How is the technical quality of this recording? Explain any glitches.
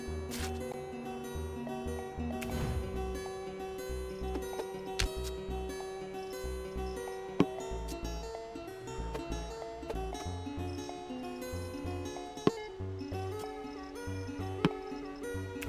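The recording has one problem that lasts its whole length: a wrong sample rate. From start to finish the audio plays about 1.45 times too fast and about 6.45 semitones too high, because the samples are read out faster than they were captured, with no rate conversion. The ratio fits material recorded at 22 kHz and played at 32 kHz. The sound comes across as hurried and chipmunk-like. On a spectrogram every component sits proportionally higher and events are compressed in time. In the waveform, the envelopes look squeezed horizontally.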